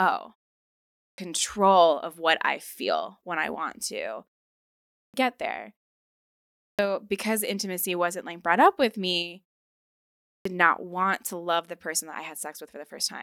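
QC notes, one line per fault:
0.58–1.18 s, 4.60–5.14 s, 6.24–6.79 s, 9.89–10.45 s: clipped start after a pause. Each follows a silence of 0.31 to 0.55 s. The first 0.54 to 0.60 s of speech is missing, so words begin abruptly. The output likely sleeps in silence and wakes late.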